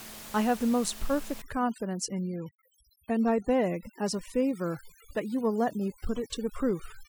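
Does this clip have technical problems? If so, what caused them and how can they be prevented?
Yes. From 1.42 s to the end of the clip, the pauses drop to near silence scattered with twinkling specks. That is overdone noise removal. The reducer was set so aggressively that it shut off individual frequency bands whenever they came close to its noise estimate, and the quieter parts of the voice went with them. The underlying room noise sits only about 17 dB below the speech, so quieter speech detail fell within that threshold. To prevent it, use a gentler reduction amount or a lower noise floor setting, and record with the microphone closer to the speaker so the voice sits well above the room noise.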